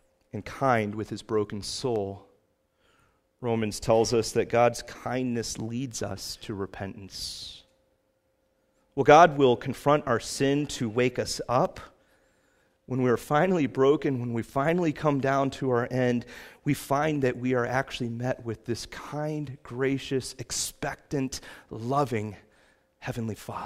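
A speech recording with two sharp, isolated clicks, at 1.96 s and 11.65 s. Each is a single thin tick, far too brief to remove any sound. The likely cause is dropped samples: a tiny fraction of a millisecond goes missing, so the waveform jumps abruptly.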